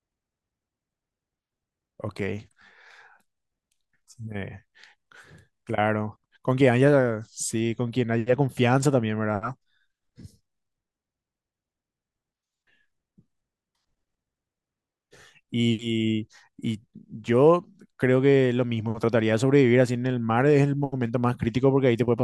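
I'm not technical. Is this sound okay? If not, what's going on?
Yes, this speech recording sounds fine, and there is nothing wrong to point out. No moment in it needs a closer listen.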